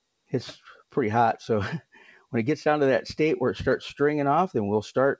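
Throughout, a noise suppressor meant for speech is applied to the sound, treating sustained parts as noise and pulling them down, so the level pumps by around 5 dB. From 1.82 to 2.32 s, the suppressor cuts the sound by up to about 11 dB for roughly a third of a second in total, thinning steady and decaying parts. The top end stops at 8 kHz, consistent with a G.722 call path.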